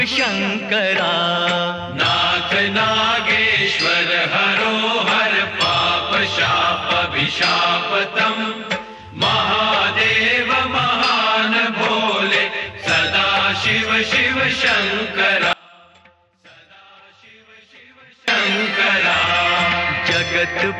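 At 15.53 s the sound drops abruptly to a faint residue and stays there until it snaps back at 18.28 s, a gap of about 2.75 s. It is not a pause or a fade. The break is sharp, and what remains is a faint sound roughly 30 dB below its normal level. This is an audio dropout to a faint residue. The likely cause is the wanted signal being lost upstream while the path after the break stayed live, letting only a trace through.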